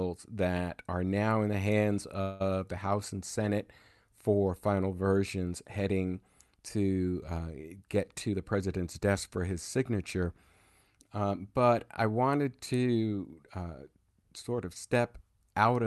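Packets most likely stalled in transit and the jitter buffer ran dry at 2.21 s, just after "now in the hands". That caused a call audio freeze: the last sound carries on as a fading buzz or hiss until 2.42 s, then resumes where it stopped, adding a 186 ms gap.

The jitter buffer later held more audio than its target and trimmed short pitch-period slices repeatedly from 8.28 to 9.90 s, after "heading to uh get". This jitter buffer speed-up runs about 11% fast at unchanged pitch, dropping roughly a fifth of a second and sounding hurried.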